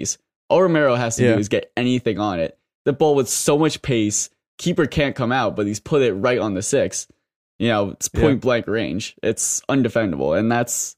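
Speech with no audible faults.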